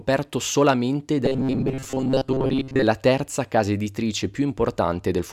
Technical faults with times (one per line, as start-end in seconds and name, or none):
1.26-2.84 robotic sound from repeated short buffers